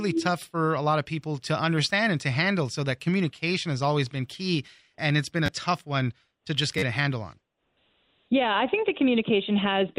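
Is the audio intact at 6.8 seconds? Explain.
No. Between 6.78 and 6.83 s, after "tough one to just" and before "a handle on", there is a repeated buffer: new audio arrived late, so the same roughly 11 ms piece, which fits a 512-sample buffer, played four extra times, losing about 40 ms of speech. It sounds like a brief buzzy stutter. On a waveform the identical short cycle repeats with hard joins, and a spectrogram shows evenly spaced vertical seams and a buzz-like harmonic pattern.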